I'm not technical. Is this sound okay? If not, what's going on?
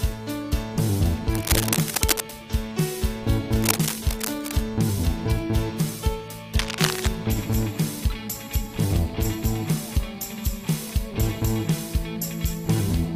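No. Three bursts of scratchy rustling sit on top of the sound, at 1.34 to 2.22 s, 3.56 to 4.62 s and 6.59 to 7.08 s. This is cable scratch noise, likely from a worn cable or plug being moved. At 8.83 s a brief glitch comes from damaged data in a compressed stream, where the player stumbles.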